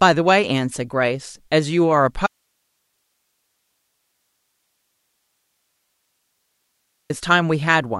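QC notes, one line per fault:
2.27–7.10 s, audio dropout to a faint residue: the speech cuts off abruptly and stays gone for about 4.8 s, leaving only a thin hiss roughly 50 dB below the signal before returning just as suddenly. Likely cause is the source feed breaking while the downstream path stayed live, so its noise floor carries through the gap. On the waveform this shows as a near-flat band with hard edges; the spectrogram shows a faint, even broadband haze between them.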